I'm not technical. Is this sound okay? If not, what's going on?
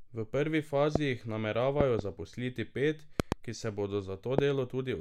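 No. An electrical jolt, likely from a plug, switch or static, got into the signal, causing a loud pop well above the speech at 0.96–0.98, 1.81–2.01 (two pops), 3.20–3.34 (two pops) and 4.39–4.41 seconds.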